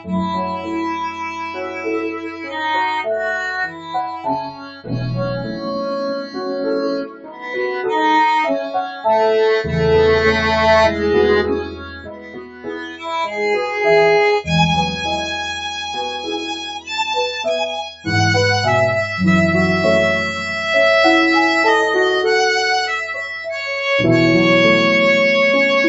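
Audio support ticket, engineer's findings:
Noise suppressor applied to music or sounds: level pumping across the whole clip, swings of about 15 dB. Speech-tuned suppressor treating sustained, non-speech content as noise. Attacks pass, held content and tails are pulled down. Waveform: envelope breathing, transients intact, sustains sagging. Spectrogram: sustained bands flicker and thin between onsets, decays cut short, all content stopping at the 8 kHz ceiling of the call path.

Sound cut by the noise suppressor: level drops at 0.00–2.62 s, 3.67–4.95 s, 5.43–5.79 s, 6.21–6.51 s, 6.98–7.56 s, 11.62–13.10 s, 15.99–16.88 s and at 17.9 s. Deepest about 16 dB (11.62–13.10 s), shallowest about 9 dB (5.43–5.79 s). Same suppressor component. Gain clamped where steady or fading sound looks noise-like. Waveform: envelope notches. Spectrogram: fades, tails truncated.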